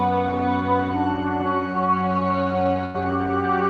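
Near the end, at about 2.85 to 2.96 s, there's a burst of packet loss. A run of packets never arrived in time, so the receiver stretched the last bit of sound for roughly 87 ms, fading it out, and then picked up again with about 80 ms of audio gone.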